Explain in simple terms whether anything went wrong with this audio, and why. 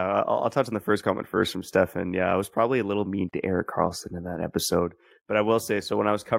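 Something did go wrong. At about 3.30 seconds a brief gap of around 36 milliseconds opens in the speech, ending at 3.33 seconds. This is a gap at a join of encoded pieces: the audio was compressed in separate sections and then stitched together without trimming the bit of silence each section carries at its edges. What sets it apart from a dropout is that nothing is lost. The speech carries on exactly where it stopped, rather than skipping ahead.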